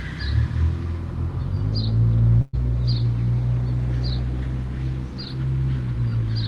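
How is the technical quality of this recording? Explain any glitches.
One glitch stands out: a burst of packet loss from 2.41 to 2.55 s. About 120 ms of audio never arrived, and the receiver filled roughly 117 ms by extending the last sound and fading it. This is heard as a brief held, decaying tail with no silence, after which the audio resumes further on, with the lost portion gone.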